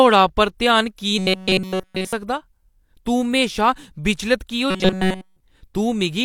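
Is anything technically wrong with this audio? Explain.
Yes. The speech turns robotic twice, from 1.18 to 2.13 s and from 4.70 to 5.40 s, most likely from repeated short buffers: fresh audio isn't arriving in time, so a single tiny slice is looped while the real signal is skipped. Nearly all of each stretch is repetition, leaving a rigid metallic buzz at 188 Hz, which fits a buffer of about 5.3 ms. Unlike ordinary stutter, no chunk repeats audibly; the sound follows the speech contour only roughly.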